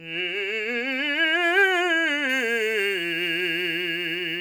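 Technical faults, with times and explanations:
2.29 s to 4.40 s, pre-emphasis left on: from this point the music's treble is lifted by about 10 dB at 10 kHz relative to 1 kHz, a tilt that fits a 50-microsecond FM curve whose matching de-emphasis was never applied, so the sound turns thin, bright and sibilant.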